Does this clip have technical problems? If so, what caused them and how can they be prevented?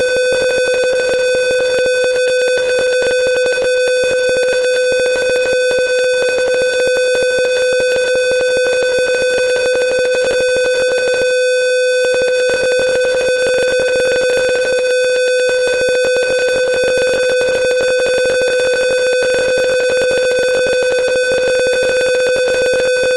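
No, this clip has no technical problems, so there is nothing to trace or prevent.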